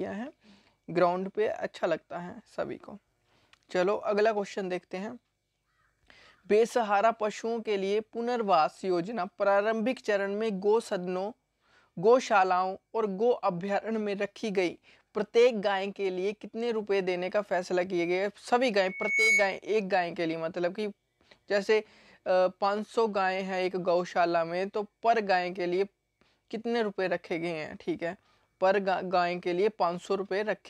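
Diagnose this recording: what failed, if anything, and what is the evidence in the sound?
A pure whistle near 2.2 kHz rises out of the sound at 18.84 s, swells over a little under half a second until it sits a few decibels above everything else, then stops at 19.60 s. That is loudspeaker feedback squeal, a fault in the analogue acoustic path: the microphone was hearing its own loudspeaker, and at 2.2 kHz the round-trip gain topped unity, so that one frequency kept feeding itself and growing until the loop was broken.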